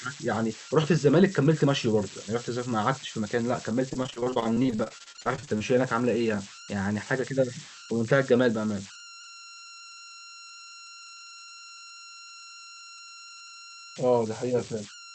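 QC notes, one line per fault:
Throughout, converter idle tones: a tone near 1.5 kHz sits in the pauses and turns to grainy noise under quieter sound, about 16 dB below the signal. Without dither, the delta-sigma converter gets stuck cycling the same bit patterns at low levels.
3.89 to 5.62 s, repeated packet loss (robotic sound): the audio goes choppy, with roughly thirty short dropouts, the longest about 31 ms. About a third of the stretch is concealment, the last bit of sound stretched to cover each hole before the next one lands.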